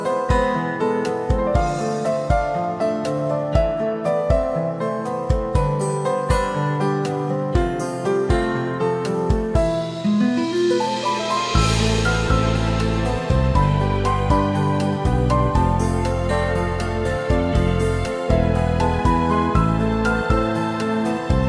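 No technical faults can be heard anywhere in the audio.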